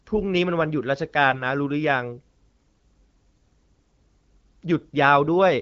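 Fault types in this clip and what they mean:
AMR bit errors: At 1.30 to 1.42 s the speech briefly turns hoarse, scratchy and gargly. Pitch and level hold roughly steady. This is a burst of corrupted bits in the coded stream, around one bit in ten. The checksum on the key bits still passed, so the decoder used the damaged frames. Its excitation pulses landed in the wrong places. Fine pitch, gain and spectral values were off. The sound sits on wideband HD Voice coding with only light codec damage.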